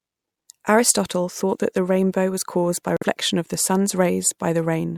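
At 2.94 to 3.03 s there is damaged data in the compressed stream: corrupted bytes made the decoder misread those frames and lose sync until it found the next frame header. In the speech this comes out as a brief glitch lasting about 90 ms.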